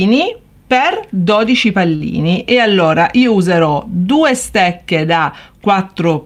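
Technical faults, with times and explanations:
1.95 to 2.02 s, short stall from a late packet: a packet arrived late and the jitter buffer ran dry, so about 46 ms of held sound fills the gap before playback resumes without loss, leaving a brief stretch with a slight buzz or dip.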